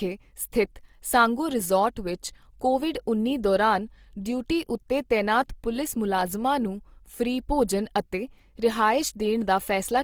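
From start to finish the speech carries Opus compression damage, plainly audible as a rough, grainy texture on voiced sounds rather than a swirling one. The likely cause is Opus in its CELT music mode at a low rate, consistent with about 24 kbps. Short of bits, the encoder fills bands with folded or noise-like content instead of leaving gaps. A spectrogram shows full bandwidth up to 20.3 kHz, with harmonics smeared into speckled noise and few holes.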